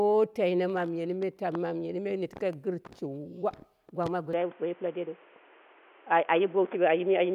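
Loud pops strike at 1.55 to 1.57 s, a single sharp pop about 10 dB above the speech, and at 2.37 to 2.55 s, a double pop about 5 dB above it. These are likely voltage pulses from a plug, switch or static, shaped by the circuitry while the speech continues underneath.

Input switched to a poorer device at 4.33 s, lasting to the end with no gap at the switch. Nothing above 3.5 kHz survives, so the speech turns dull and boxy, the level shifts by about 5 dB, and new background noise sits about 30 dB below it. A likely change to a narrower-band microphone or headset profile.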